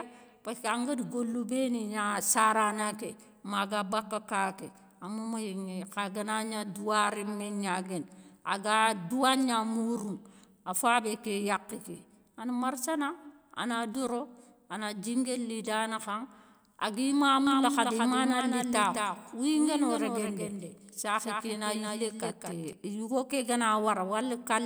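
A second capture path running behind the first, or an edit holding two copies out of step, has most likely left this speech clip with a doubled audio track from 17.47 s to 22.73 s. A full-band copy trails the original by around 200 ms, only about 5 dB quieter, with no decay or room colour. It switches in and out abruptly, so that stretch sounds like a dry, slapback repeat.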